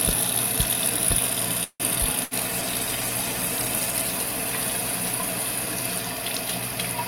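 At 1.63 s the audio stalls until 1.83 s in what is likely a call audio freeze, with packets delayed in transit so the jitter buffer ran dry. The receiver stretched the last sound into a fading fill of about 164 ms, ending in roughly 50 ms of silence. Playback then picks up exactly where it stopped, so nothing is lost, but everything after this point now runs about 164 ms later than before.

From 2.24 to 2.34 s a burst of packet loss follows. Here the missing packets never arrived in time, so the receiver filled about 74 ms by extending the last sound as a decaying buzz or hiss, lowering its level as the gap went on. When playback resumes it has skipped ahead, and about 80 ms of the original sound is simply gone.

At 2.45 s a call bitrate drop sets in and lasts until 6.53 s. The bandwidth estimate fell and the encoder went from 96 kbps down to 16 kbps, staying at that lowest rate for about 1.25 s. 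At that rate Opus quantises coarsely and trims the upper frequencies, so the sound turns muffled and rough or watery, with the top end dulled until the rate climbs back.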